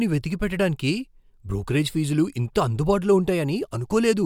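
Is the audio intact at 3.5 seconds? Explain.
Yes, the speech at 3.5 s is intact, with no dropout, click or other fault at that moment.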